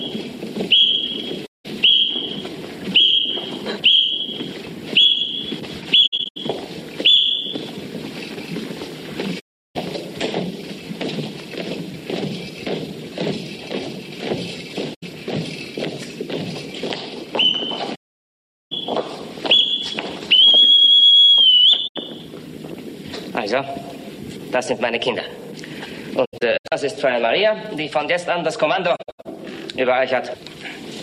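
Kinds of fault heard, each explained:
AAC frame loss with muting: missing frames are decoded as silence, and the overlapping windows fade the sound out and back in, leaving soft-edged holes. Eight occur, lasting from about 85 ms to 770 ms (at 17.95 s); three break into scattered shorter gaps.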